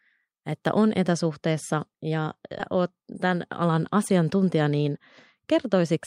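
At 2.59 to 2.61 s there's a skip ahead: roughly 400 ms of speech just drops out and the two sides butt together with no gap, so it lurches forward.

Then there are two jitter buffer speed-ups, where the receiver trims short pitch-period chunks to shed extra delay. From 3.15 to 3.96 s it runs at 105% and loses about 50 ms. From 4.62 to 4.86 s it runs at 114% and loses around 40 ms. Pitch stays put but the speech sounds a bit rushed.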